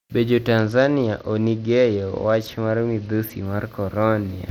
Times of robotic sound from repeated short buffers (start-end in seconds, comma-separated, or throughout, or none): none